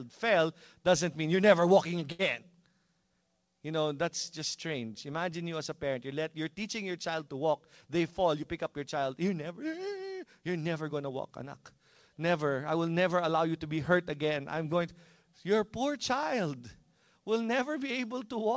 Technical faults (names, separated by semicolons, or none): short stall from a late packet; jitter buffer speed-up